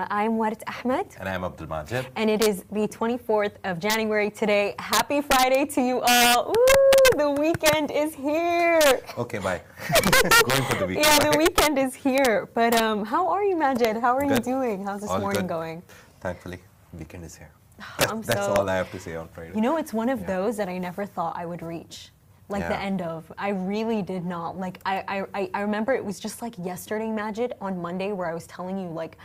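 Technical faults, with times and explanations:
Throughout, integer overflow: the signal is driven about 3 dB past the integer limit, and instead of being held at the maximum, the few peaks that exceed it, well under one percent of samples, wrap to the opposite extreme, producing sharp, violent cracks on loud passages, harsher than clipping.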